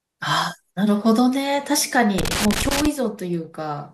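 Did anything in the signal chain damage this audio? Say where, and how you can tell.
Yes, in the analogue wiring. From 2.18 to 2.86 s the speech breaks into irregular crackle. That is loose connector crackle: a worn contact rapidly making and breaking, chopping the signal.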